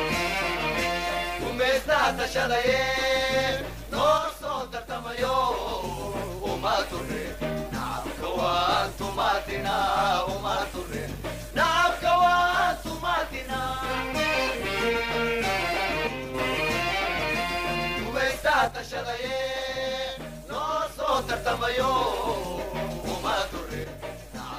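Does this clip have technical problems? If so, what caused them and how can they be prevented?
Yes. One channel drops out four times, most likely from an intermittent connection on one side of the stereo feed. When that side vanishes, the mono sum loses half its contribution, so the sound falls abruptly by about 6 dB and anything carried only on that side disappears. This happens at 4.18–5.18 s, 16.07–16.34 s, 18.68–21.08 s, and from 23.84 s to the end. Securing and testing cables and connectors before recording prevents it.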